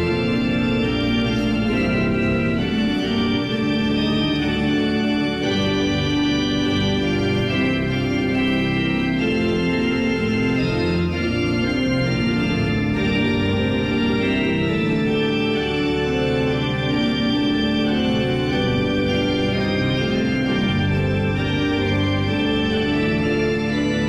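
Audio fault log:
Nothing stood out on listening, and no fault was heard anywhere in the clip.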